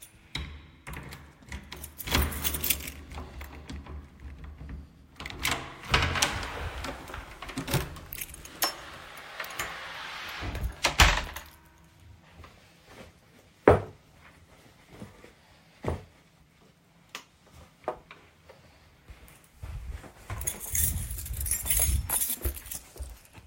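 Listening closely, nothing in the recording stood out as a technical problem at any point.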